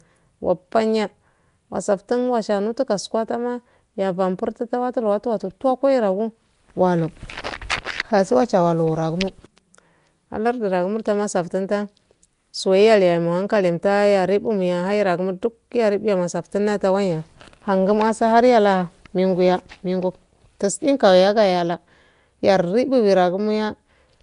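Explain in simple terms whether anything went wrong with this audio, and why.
From start to finish the speech has a rough, hissy haze around it and a smeared, underwater quality, and nothing is heard above about 10.6 kHz, so it lacks crispness. This is the sound of Nellymoser compression, likely from Flash's old microphone codec. It squeezes each short block of sound into very few bits, gives the weakest frequency bands none at all, and fills those gaps with noise.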